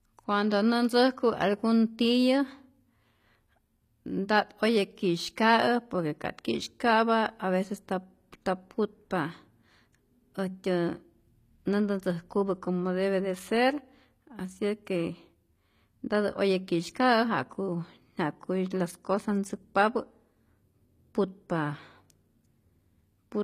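A speech clip in which the sibilants sound gritty and metallic throughout, with treble that is bright but not quite real and nothing above about 14.9 kHz. This is likely HE-AAC compression, fitting a rate near 24 kbps, rebuilding the upper band from copied lower bands.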